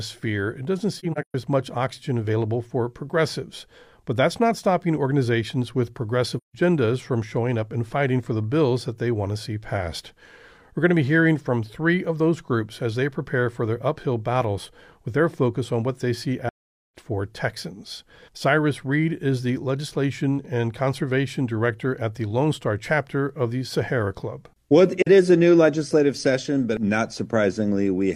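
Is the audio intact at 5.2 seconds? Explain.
Yes, the audio is intact at 5.2 seconds, with no dropout, click, distortion or other fault at that moment.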